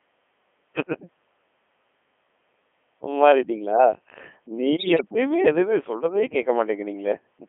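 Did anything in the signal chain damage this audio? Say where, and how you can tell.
Yes, and it's the codec stage all the way through. The whole clip has that robotic, buzzy quality of a Codec 2 vocoder, squeezed into a 250 Hz to 3.4 kHz band, and the damage is heavy. The character fits its top 3.2 kbit/s mode. The decoder rebuilds the speech from sine waves driven by pitch, voicing, energy and a spectral envelope, so the original waveform is gone, and that's why it sounds synthetic rather than just muffled.

The second problem is in the radio link. From 4.76 to 5.02 s there's a burst of bit errors on digital voice radio. The synthetic voice suddenly jumps in pitch, level and tone colour and breaks into warbly, bleepy gibberish. At this bitrate every bit helps set a whole frame's pitch, level or spectrum, so a bit error rate of around 5 percent scrambles frames outright. A quarter-second disruption like this fits about a dozen corrupted frames.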